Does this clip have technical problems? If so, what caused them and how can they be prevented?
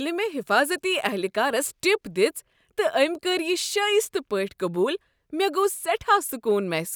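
No, there are no technical problems in this clip.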